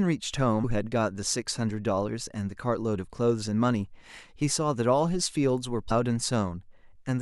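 At 0.63 s and 5.9 s, compressed frames are skipped. The speech jumps forward by about 300 ms and then about 150 ms, consistent with roughly 23 ms codec frames. Each join is an abrupt jump forward rather than a gap of silence.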